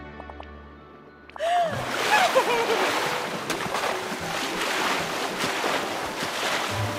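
A doubled audio track appears from 4.73 s to the end of the clip, likely because the audio was captured a second time through a slower path. A second full-band copy trails the original by roughly 0.7 s, a few decibels quieter, and cuts in abruptly.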